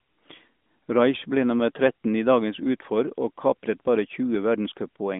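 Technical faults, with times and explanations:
No technical faults are audible anywhere in this recording.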